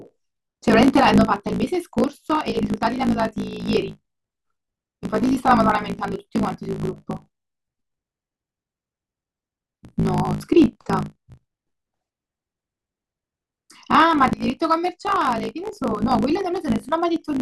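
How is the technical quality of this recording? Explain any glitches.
The recording has one fault throughout: a block size mismatch (truncated), present from start to finish. Each block is written at what sounds like 1024 samples, but the next stage reads a shorter block and drops the tail of each one. These regular gaps produce a buzz at about 54.4 Hz, and the speech runs 1.16 times too fast while keeping its timbre.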